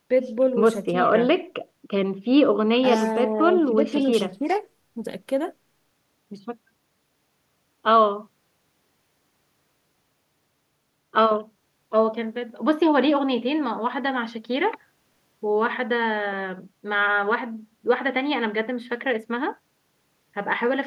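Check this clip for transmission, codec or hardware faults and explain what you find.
Nothing stood out as a fault on listening to this speech recording.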